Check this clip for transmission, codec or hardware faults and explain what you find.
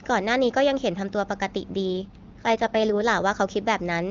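One transmission fault is audible: an AMR rate drop. From 1.87 to 3.02 s the speech turns rough and synthetic, with no gap or narrowing. This fits the network cutting the AMR-WB codec from 23.85 to 8.85 kbit/s to protect a weak radio link.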